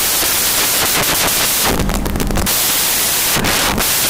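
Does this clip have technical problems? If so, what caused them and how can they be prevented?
Yes. Samples built from the wrong bytes throughout: the reader misassembled each sample's bytes, so fast-changing low bits dominate, giving loud, harsh broadband noise. Prevent it by declaring and checking byte order, offset and sample width when reading.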